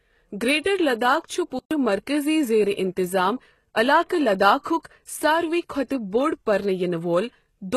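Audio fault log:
Throughout: HE-AAC compression, likely. The treble sounds rebuilt rather than recorded, and the codec damage is plainly audible. Nothing is heard above about 12.3 kHz, and the upper band is copied up from lower bands, so its harmonics don't line up with those below. That mismatch separates it from plain low-pass filtering, which would only remove treble.
1.59–1.71 s: playback stall, likely. The speech stops in mid-flow for 120 ms and the output goes silent while the player waits for data or a blocked thread. A dropout in the recording itself would lose material rather than pause it.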